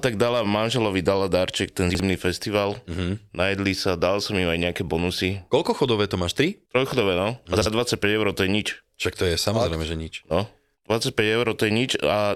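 Chunks out of order appear twice in this speech, from 1.90 to 2.00 s and again from 7.57 to 7.66 s. Each time a block of about 46 ms (a length that fits a 2048-sample buffer at 44.1 kHz) was delivered one block late and played after its successor. No audio goes missing, but the sequence swaps, leaving three abrupt joins and a brief jumbled scramble in the syllable flow.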